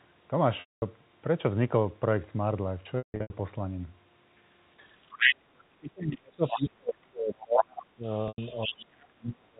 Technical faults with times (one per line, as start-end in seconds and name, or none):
0.60-0.82 packet loss with pitch repetition
2.98-3.30 packet loss with pitch repetition
5.06-5.32 other side's voice leaking through
5.16-8.05 speech suppressed in double talk
6.46-6.61 other side's voice leaking through
7.57-8.86 other side's voice leaking through
8.28-8.38 packet loss with pitch repetition
8.65-9.60 speech suppressed in double talk